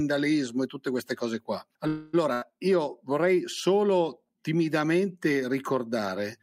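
At 1.87 s, just after "tutte queste cose qua", a call audio freeze holds the last sound as a fading buzz or hiss for about 0.28 s, likely from packets stalling and the jitter buffer running dry. The speech then resumes exactly where it stopped, delayed but complete.

Shortly after, at 2.33 s and before "io vorrei", a burst of packet loss fills about 84 ms with a decaying held sound. Unlike the freeze, the speech picks up about 80 ms further on, so that stretch is simply gone.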